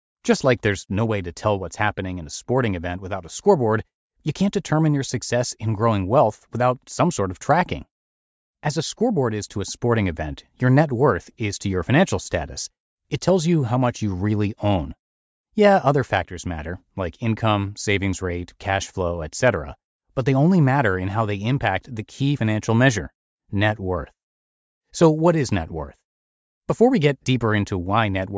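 A spoken recording with nothing technically wrong that the ear can pick up anywhere in it.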